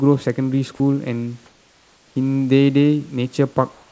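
Sound dropped by the voice detector occurs at 0.76–0.80 s in this speech clip. About 20 ms of speech vanishes inside a 40 ms gap filled with steady noise, likely because the sender's voice detector mistook that quiet stretch for background and briefly stopped transmitting. Comfort noise in place of the background appears at 1.46–2.16 s and again from 3.72 s to the end. Both times the real room noise, sitting about 38 dB below the loudest sound, gives way to a smooth, featureless hiss. In the first pause that hiss is about 3 dB quieter, and in the second it matches the level. This is likely discontinuous transmission, with the receiver synthesising noise while the sender stayed silent. The audible band stops at 8 kHz, consistent with a G.722 wideband call codec, and the room noise itself is part of the recording rather than a fault.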